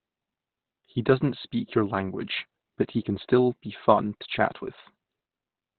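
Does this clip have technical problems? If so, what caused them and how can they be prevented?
Yes. Throughout the speech the sound is muffled and hoarse, with nothing above about 4.2 kHz, as in heavy Opus compression. The likely cause is Opus in its SILK speech mode at narrowband, which fits a very low bitrate around 12 kbps. On a spectrogram the energy stops at a flat ceiling near 4.2 kHz for the whole clip. Prevent it by encoding at a higher bitrate so Opus keeps wideband or fullband audio.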